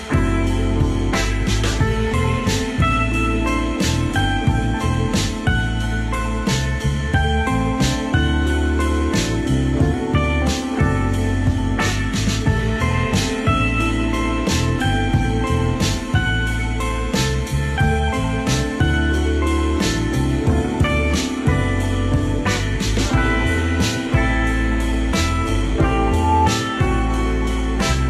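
At 26.06 s a loudspeaker feedback squeal begins, lasting until 26.51 s. A single tone near 867 Hz swells out of the sound over roughly a third of a second and ends up around 5 dB louder than the material itself. The microphone was hearing its own loudspeaker, and at that frequency the loop gain crossed unity. Unlike a steady interfering tone, it grows by itself rather than arriving at full level.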